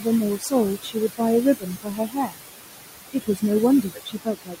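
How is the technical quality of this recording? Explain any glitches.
The recording is compromised by heavy noise suppression, which both pumps the background and eats into the speech.

Noise suppressor artifacts run through the whole clip. The room noise, which sits only about 8 dB under the speech, is pulled down by about 19 dB wherever the suppressor judges a band to be steady noise, frame by frame. On a spectrogram the noise floor appears as patchy, flickering blotches, with dark holes between phrases and noise reappearing beneath voiced parts.

Speech cut by the noise suppressor occurs at 0.36–0.53 s, 0.82–1.21 s, 1.6–2.41 s, 3.13–3.43 s and 3.82–4.57 s. The suppressor mistakes soft speech for noise and lowers it along with the background, by about 15 to 21 dB at the deepest points, cutting deepest in the last stretch. Consonants and word endings sound swallowed or faint. On a waveform the envelope dips mid-phrase, and the spectrogram shows faint, broken high-frequency consonant energy.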